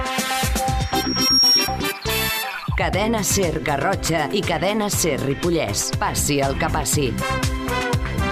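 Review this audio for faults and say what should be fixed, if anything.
Loudspeaker feedback squeal runs from 0.81 to 1.81 s. A lone 5.6 kHz tone swells over about half a second to roughly 5 dB above the sound. The microphone hears its own loudspeaker, and loop gain exceeds one there. Lower monitor gain or notch 5.6 kHz.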